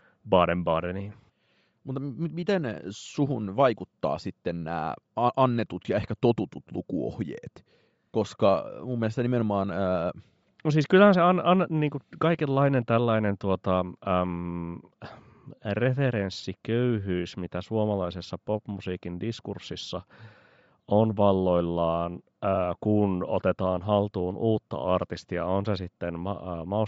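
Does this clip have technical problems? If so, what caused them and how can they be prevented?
Yes. Throughout, the speech has a grainy, breathy upper band, likely Bluetooth LC3 compression at a low bitrate (which fits roughly 32 kbps), with zeroed highs refilled by noise. Raising the LC3 bitrate or recording over a wired connection prevents it.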